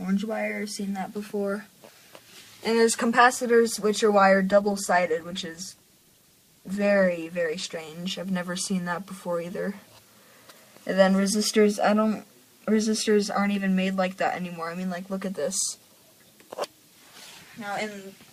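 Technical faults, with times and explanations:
4.52–7.85 s, call bitrate drop: the sound turns coarse and watery and loses its top end, which fits the encoder falling from around 128 kbps to roughly 16 kbps after the call's bandwidth estimate fell, holding at its lowest for about 3.27 s before recovering. Unlike packet loss, there are no gaps, repeats or robotic fills. Unlike a plain low-pass filter, the dulling comes with swirly coding artefacts, and full quality returns once the bitrate recovers.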